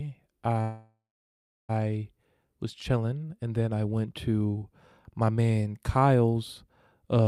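At 0.61 s the speech stops in a call audio freeze lasting until 1.71 s. The last sound stretches into a fading buzz, then about 0.68 s of silence. Speech resumes where it stopped, now about 1.07 s late, with nothing lost. Delayed packets likely emptied the jitter buffer.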